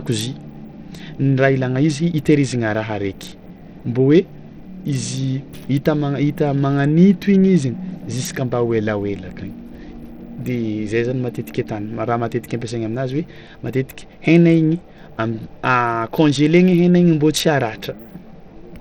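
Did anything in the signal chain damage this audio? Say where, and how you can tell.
Yes. Throughout the speech the treble flickers and drops out beneath gritty, aliased noise. The likely cause is Bluetooth SBC compression at the codec stage, at a bitrate low enough, around 80 kbps, to starve the top sub-bands of bits.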